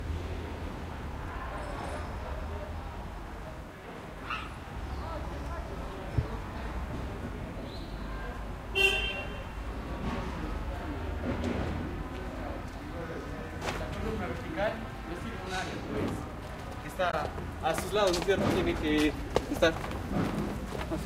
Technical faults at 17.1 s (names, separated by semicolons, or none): damaged data in a compressed stream